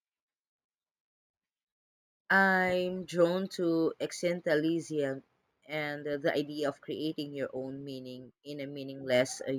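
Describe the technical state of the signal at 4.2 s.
Imaging from linear upsampling is present at 4.2 s, as it is across the whole clip. Straight-line interpolation from what sounds like a 16 kHz source dulls the top of the band and leaves faint mirror images from 8 to 16 kHz, roughly 30 dB down, heard as a light metallic shimmer on sibilants.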